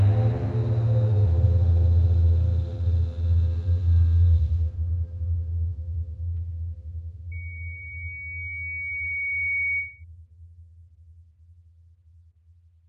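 From 7.31 to 10.04 s, a loudspeaker feedback squeal: the microphone re-amplifies its own loudspeaker, so a 2.2 kHz tone swells within about two seconds to match the sound's level.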